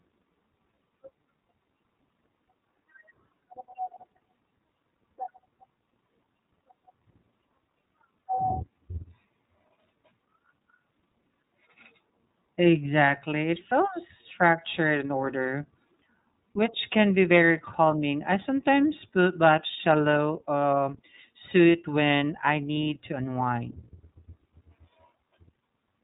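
The speech runs through the iLBC codec for its whole length. It is band-limited hard at about 3.8 kHz and has a plainly audible rough, synthetic edge. Each frame's excitation is coded on its own, and the texture points to the 30 ms frame mode at about 13.3 kbps. On a spectrogram, energy stops at a flat ceiling near 3.8 kHz with empty space above it. The waveform's fine detail looks coarsened rather than clipped.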